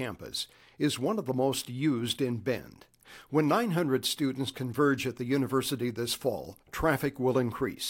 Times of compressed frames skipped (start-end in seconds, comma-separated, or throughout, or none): none